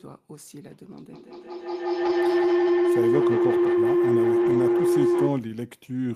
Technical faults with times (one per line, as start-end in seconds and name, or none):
1.13-5.50 feedback howl
2.05-2.11 lost packet rebuilt from error correction
4.45-4.59 lost packet rebuilt from error correction